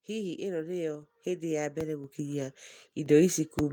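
At 1.02 s the speech and the room tone behind it suddenly get louder together, by about 4 dB, with no change in tone. This is a microphone volume stepped up event: the call software judged the input too quiet and raised the device's capture level in one jump, so everything the microphone picks up rises at once.

At 1.81 s a low thump sits under the speech, which carries on undisturbed. This is a DC step, where the waveform's zero line suddenly shifts. Here the offset does not hold but drains away, as though a high-pass filter near 5 Hz were pulling it back toward zero.

At 2.04 s the level jumps again, this time by about 5 dB. This is a second microphone volume stepped up event, with voice and background rising together.

At 3.06 s a third step of about 4 dB follows. By now the level sits at roughly 13 dB above where the clip began.

At 3.59 s another low thump marks a second DC step. It too fades away as the offset decays.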